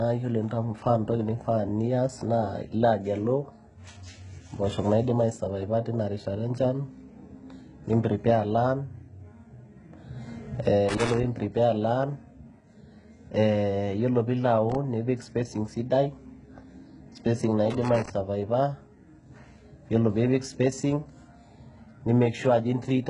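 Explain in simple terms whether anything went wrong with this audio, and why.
Two things went wrong with this speech. Throughout, the treble sounds thin and artificial, with s sounds turning gritty or lispy and nothing at all above 11 kHz. That points to heavy HE-AAC compression, likely squeezed to a very small file. This codec keeps only the lower sounds and fakes the treble by copying them upward, so the top end is present but not the original. Unlike plain muffling, the high end is still there, just false and metallic.

Separately, there are three bursts of loose connector crackle, at 10.89–11.24 s, 14.70–14.75 s and 17.70–18.10 s. A worn or dirty plug contact briefly loses and regains connection, chopping the sound into irregular scratchy crackle. Unlike the compression, which colours everything, these come in short, uneven bursts only at those moments, the sort of noise a plug makes when it is wiggled.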